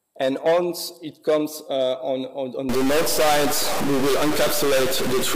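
From 2.69 s to the end, a stuck bit, likely a data line or converter bit held fixed, leaves about half the samples off by a step of roughly -20 dBFS. The sound turns harsh and buzzy, and quiet gaps fill with loud noise.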